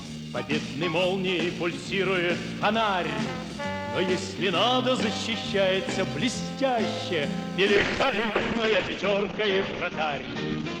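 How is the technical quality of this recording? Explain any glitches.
One glitch appears: a call bitrate drop from 7.78 s to the end. The encoder received far fewer bits, consistent with about 7 kbps. Top frequencies collapse from 20 kHz to 8 kHz. The sound turns muffled and rough.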